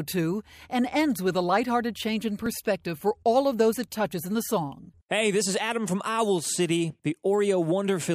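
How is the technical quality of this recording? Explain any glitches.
One glitch stands out. At 2.46 s the audio jumps ahead. This is likely a dropped buffer (overrun). About a millisecond or two of samples was overwritten before being read, so the two sides join directly with no gap.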